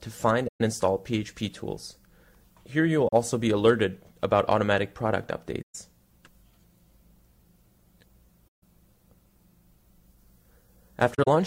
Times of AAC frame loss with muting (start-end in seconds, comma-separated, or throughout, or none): 0.47-0.61, 3.08-3.12, 5.62-5.75, 8.48-8.62, 11.14-11.28